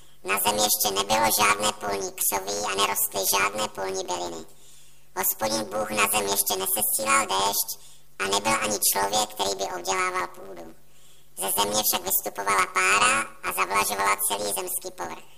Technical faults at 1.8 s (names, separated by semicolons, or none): planar audio read as interleaved